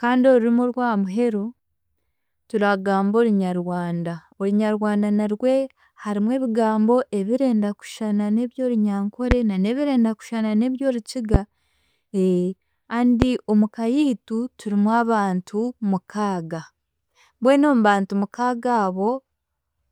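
Speech with three loud pops, at 9.31 to 9.34 s, 11.34 to 11.38 s and 13.22 to 13.25 s, each a single sharp hit about 20 dB above the voice, which carries on underneath. They're likely voltage spikes from a connector, switch or static discharge.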